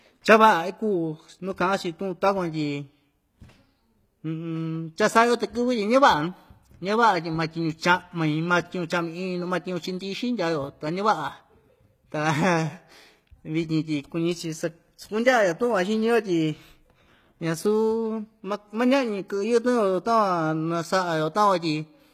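Throughout the speech, s sounds come out gritty and metallic, and the treble sounds synthetic, with nothing above 14.9 kHz. This is likely HE-AAC compression, rebuilding the upper band by copying lower bands, which fits roughly 20 kbps.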